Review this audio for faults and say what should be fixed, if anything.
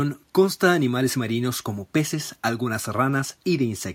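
Nothing in the speech calls for a fix; no faults were found.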